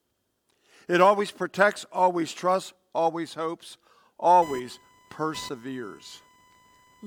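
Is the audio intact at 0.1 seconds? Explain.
Yes, at 0.1 s the audio plays through without any dropout, glitch or other technical fault.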